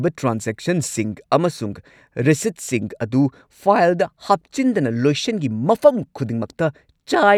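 No technical faults turn up anywhere in the recording. There is nothing to place on the timeline.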